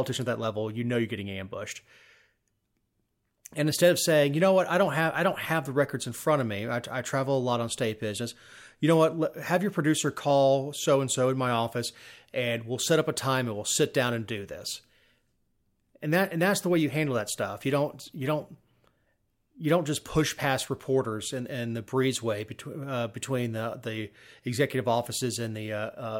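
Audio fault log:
Nothing in this speech recording stood out as a problem on listening.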